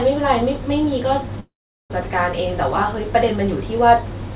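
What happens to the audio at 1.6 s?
At 1.6 s the audio sits inside a long network dropout, likely spanning 1.4 to 1.92 s. Half a second never arrives. The receiver stretches the last sound into a fading buzz or hiss, then falls silent. Unlike a brief packet loss, the gap is long, and the sound resumes with that stretch missing.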